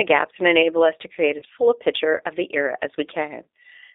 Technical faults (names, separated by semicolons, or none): G.729 codec; VoIP packet loss concealed by the speech codec